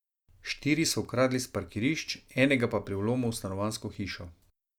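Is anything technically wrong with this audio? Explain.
No, nothing technical stands out in this speech clip, so there's nothing here to flag.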